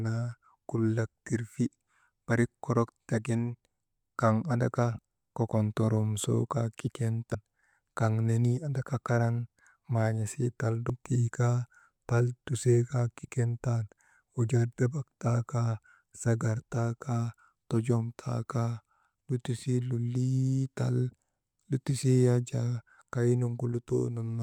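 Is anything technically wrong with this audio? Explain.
Yes, two brief glitches cut into the speech, at 7.34 s and at 10.90 s, the second just before "tii kaa tal tusee". Both come from damaged data in a compressed stream: corrupted bytes make the decoder misread frames and lose sync until it finds the next valid frame header.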